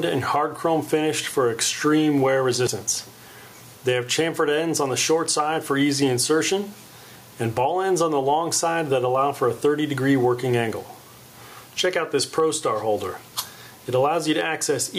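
Gain pumping runs through the whole recording: the level ducks as each loud sound arrives, swinging by about 10 dB. The likely cause is an input gain set far too high for the microphone, with a fast limiter or compressor clamping down on every peak and releasing in the pauses. Loud and quiet passages end up squeezed close together, and the sound feels crushed and breathing. A dropped buffer (overrun) occurs at 2.67 s, heard as an abrupt jump forward with no silence in between. Roughly 70 ms of sound is missing, and the material on either side is butted straight together. That points to a buffer overrun, where the software likely failed to read its samples before the hardware overwrote them, so that chunk was lost.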